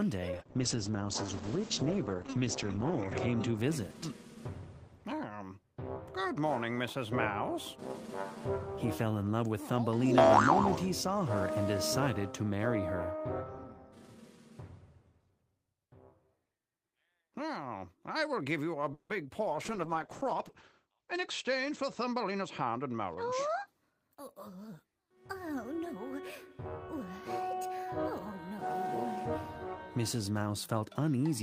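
From 0.32 to 3.63 s a call bitrate drop occurs: the bandwidth estimate collapses and the encoder is pushed from 32 kbps down to 10 kbps, holding that floor for about 2.9 s. With so few bits the coding becomes coarse and the audio band shrinks from 20 kHz to 8 kHz, so the sound turns muffled and grainy, losing its top end, before brightness returns as the rate climbs back.

At 18.93 s the sound briefly smears into a decaying buzz that lasts about 160 ms, tailing into roughly 10 ms of near-silence before resuming at 19.11 s. This is likely a call audio freeze: delayed packets let the jitter buffer run dry, so the receiver stretched out the last sound until data arrived. Nothing is skipped afterwards, but 160 ms of extra delay has been inserted.

A second call bitrate drop follows from 19.41 to 23.77 s, again falling from 32 to 10 kbps with the band narrowed to 8 kHz. This time the lowest rate lasts about 1.2 s, bringing back the same dull, roughened quality.

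Overlapping it, from 20.98 to 23.13 s, a jitter buffer speed-up trims the excess audio held in the buffer. The receiver cuts out many tiny pitch-period slices, roughly 150 ms in total, so the audio plays about 7% fast at unchanged pitch and comes across as slightly hurried.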